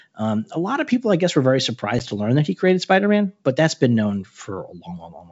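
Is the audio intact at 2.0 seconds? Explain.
No. Packet loss on an ADPCM call spans 1.99 to 2.06 s, after "I guess were very". About one packet, some 10 ms, is dropped to hard-edged silence. The decoder's predictor and step size then drift from the sender's, so speech returns with brief distortion before "to learn that he".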